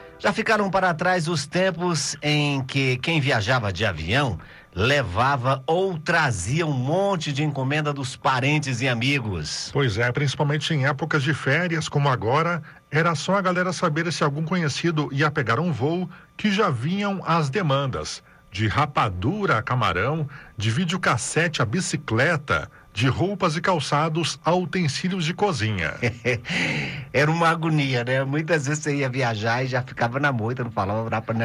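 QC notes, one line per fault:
No faults are heard anywhere in the clip. Nothing in the audio calls for a QC entry.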